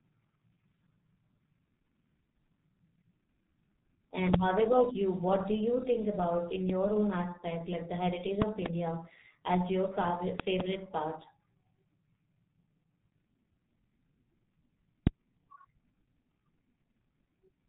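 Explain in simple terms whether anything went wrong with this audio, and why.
Throughout the speech, the G.723.1 codec, an early internet-phone compression scheme, has damaged the sound heavily. It discards everything above 4 kHz and tracks the voice only slowly, so speech sounds muffled and also hoarse, with smeared consonants. Simple muffling would dull the sound without adding that rough, blurred texture.

Loud pops also cut sharply across the speech: single pops at 4.34 s (just before "how about you"), 6.70 s (between "you think about in" and "own aspect like the") and 15.07 s, and quick double pops from 8.42 to 8.68 s and from 10.40 to 10.63 s (after "as your favorite"). The speech carries on underneath each one, which sets them apart from dropouts. They are likely electrical glitches, such as a loose plug or static.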